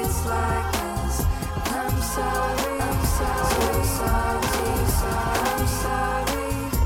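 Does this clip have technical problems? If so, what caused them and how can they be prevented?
Yes. A doubled audio track runs from 2.79 s to 5.87 s. A second, full-band copy of the same sound trails the original by about one second at roughly equal loudness, with no decay or room colour, and it cuts in and out abruptly at those two points. The likely cause is the signal reaching the mix twice, once directly and once through a slower monitoring or loopback path, or an edit leaving two out-of-step copies stacked. To prevent it, route each source to the recording only once and check edits for overlapping duplicate regions.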